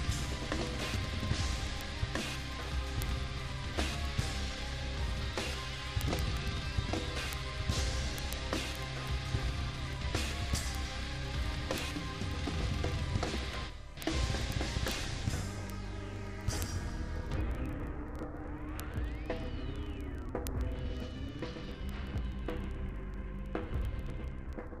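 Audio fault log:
0.10–24.78 s, word clock ticks: a steady, rapid ticking roughly every 40 ms, hundreds of clicks in all. The receiving clock runs free of the sender's, drifting by several hundred parts per million, so each slip drops or repeats one sample.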